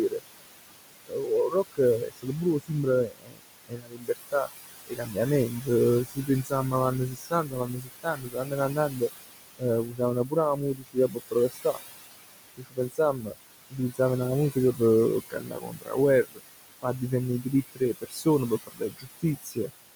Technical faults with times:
0.00-19.96 noise suppressor artifacts
0.09-0.22 speech cut by the noise suppressor
1.05-11.78 speech cut by the noise suppressor
12.57-19.70 speech cut by the noise suppressor

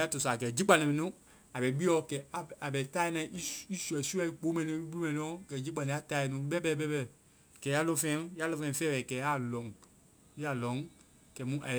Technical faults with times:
0.00-11.79 sample clock jitter

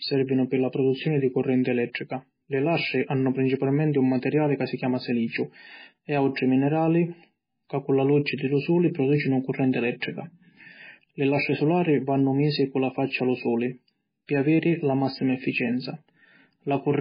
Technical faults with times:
0.00-17.00 MP3 compression

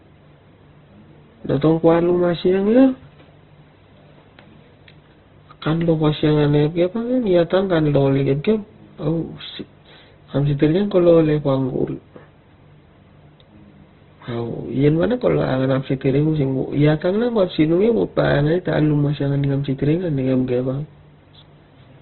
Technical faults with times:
0.00-22.01 Opus compression

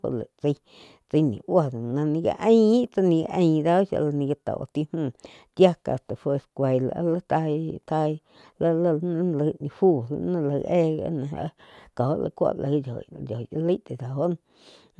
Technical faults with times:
none

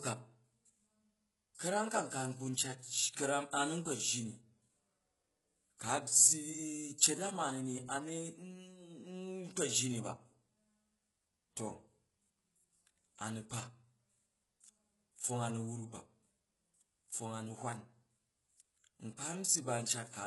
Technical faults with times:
0.00-20.27 HE-AAC compression
1.55-1.59 pre-echo

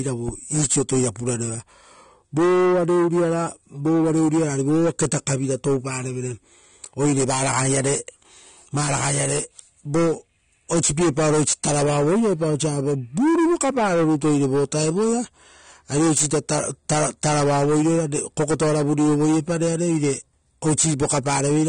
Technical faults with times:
0.00-21.68 AAC compression

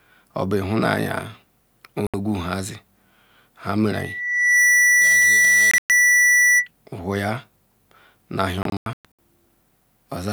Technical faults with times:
2.07-2.14 Bluetooth dropout
3.91-6.68 loudspeaker feedback squeal
5.71-5.90 Bluetooth dropout
8.63-9.19 Bluetooth dropout

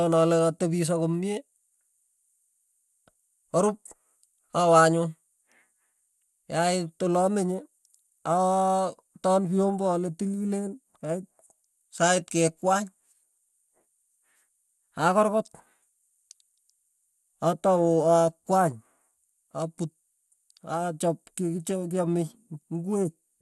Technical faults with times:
0.00-23.41 MP2 compression

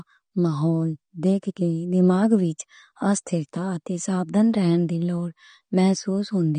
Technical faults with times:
0.00-6.59 AAC compression

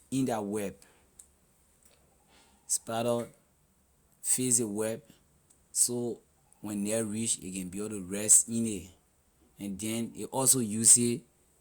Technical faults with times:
none

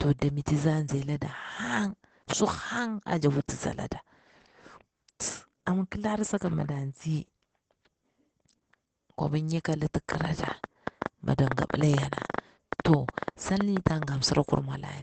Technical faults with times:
0.00-15.02 Opus voice compression
10.12-14.04 train of clicks

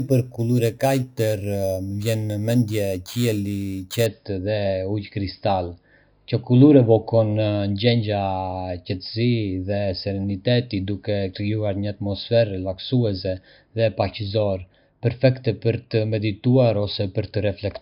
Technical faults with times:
0.00-4.06 imaging from sample-and-hold upsampling

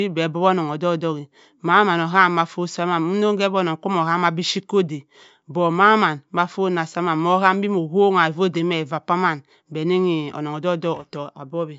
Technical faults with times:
none

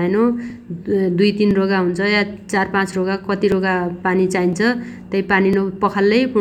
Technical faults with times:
0.50 overlapping chunks
1.51 overlapping chunks
2.51 overlapping chunks
3.52 overlapping chunks
4.53 overlapping chunks
5.53 overlapping chunks

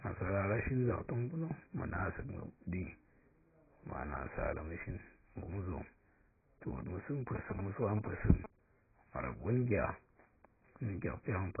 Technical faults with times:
0.00-11.60 AAC compression
7.35-8.46 GSM signalling bursts

